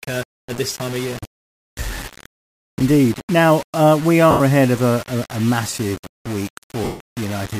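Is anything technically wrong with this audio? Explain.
Yes, two problems are audible in this speech.

Low bit depth without dither throughout: grainy distortion tracks the speech, noise only about 15 dB down, likely from 5-bit rounding without dither.

Lost LE Audio frames at 4.31–4.41 s, between "uh we" and "ahead of a a", and at 6.84–7.00 s, after "a a massive week". The decoder repeats the last spectrum with scrambled phase, so each gap (90 ms, then 160 ms) becomes a noisy smear that fades out.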